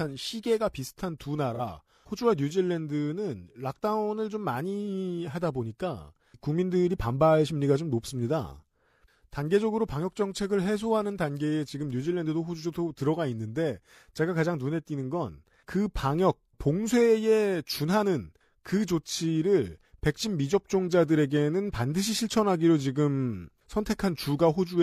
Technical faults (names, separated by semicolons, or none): AAC frame loss with concealment